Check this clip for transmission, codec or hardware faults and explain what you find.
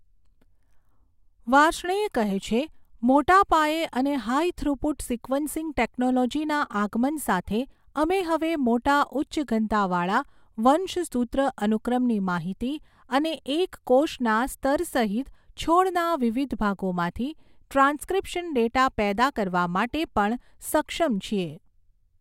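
Nothing wrong is audible anywhere in this speech recording.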